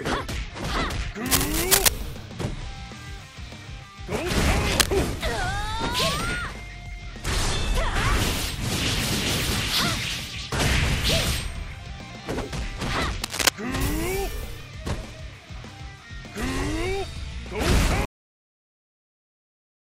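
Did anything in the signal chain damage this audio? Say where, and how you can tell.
Yes. Analogue wiring: cable scratch noise at 1.26–1.88, 4.72–4.90 and 13.24–13.49 s, about 5 dB above the signal, likely a worn connector's rapidly changing contact resistance.

Buffer or playback stage: a cut-off end at 18.05 s. The sound stops mid-event with no decay into silence because the final buffers were never written.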